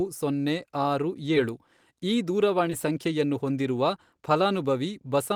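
A brief smear or wobble interrupts the speech at 1.35 s and again from 2.70 to 2.72 s. This is short concealed packet loss: about 10 ms of audio arrived too late, so the receiver extended the preceding sound to cover the gap before blending back.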